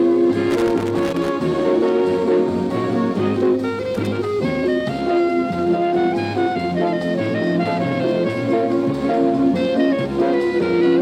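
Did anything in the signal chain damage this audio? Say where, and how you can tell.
Yes: loose connector crackle from 0.50 to 1.29 s and again from 3.95 to 4.07 s, in the analogue wiring. These irregular bursts of scratchy crackle come from a worn or dirty contact intermittently making and breaking, chopping the signal.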